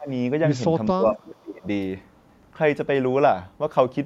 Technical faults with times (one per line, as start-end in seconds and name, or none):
0.00-0.09 speech suppressed in double talk
0.98-1.65 speech suppressed in double talk